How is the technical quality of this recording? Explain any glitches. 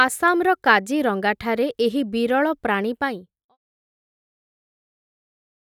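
No glitches turn up anywhere in this speech recording, and the only change in level is a gentle, deliberate-sounding fade-out that begins around 3 s and finishes at 3.57 s.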